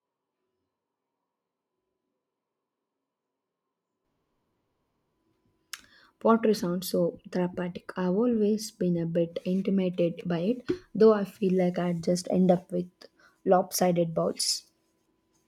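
Until 4.05 s the speech is hollow, thin and about 10 dB quieter, likely from a switch to a distant microphone. The abrupt return to close sound distinguishes it from added reverb.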